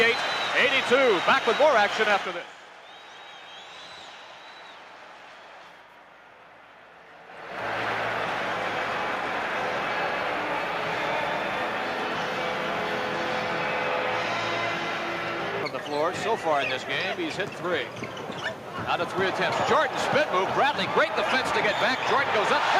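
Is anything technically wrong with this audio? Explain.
No, nothing is technically wrong.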